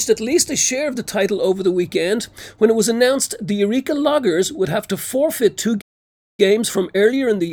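The audio cuts to silence at 5.81 s and stays silent until 6.40 s, a playback stall of about 0.57 s, likely from the player running short of buffered data or its thread being blocked. Unlike a packet dropout, which loses a short piece and carries on, the sound freezes and then resumes. From 6.40 s to the end there is time-compressed catch-up, playing about 1.1 times faster to clear the backlog. Pitch stays the same, unlike a plain speed-up.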